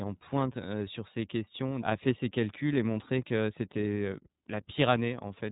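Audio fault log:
Throughout, iLBC codec. Nothing above about 3.8 kHz survives, so the speech sounds narrowband and boxed in, like a phone call. The codec damage is plainly audible as a rough, synthetic grain. The codec works in 30 ms frames and codes each frame's excitation on its own, without leaning on the frame before. That independence can leave small seams between frames. The sound fits iLBC's 13.33 kbps mode.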